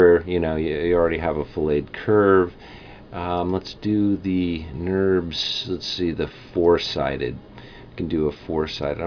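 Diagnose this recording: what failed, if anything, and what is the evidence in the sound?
Nothing failed: across the whole recording there is no audible fault at any stage from capture to playback, so there is nothing to diagnose.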